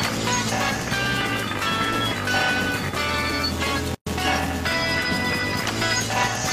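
A steady buzz at about 345 Hz runs through the whole clip, rising and falling with the level of the sound. This is a filter restarted on every block: it drops its state and starts each block from silence, leaving a small transient each time, at a rate that fits 128-sample blocks.

From 3.95 s to 4.07 s the sound stops dead for about 120 ms, then resumes exactly where it left off, with smeared edges. This is a gap at a join of encoded pieces, where separately encoded pieces, each about 6 s long, were joined without trimming the encoder's start delay and end padding.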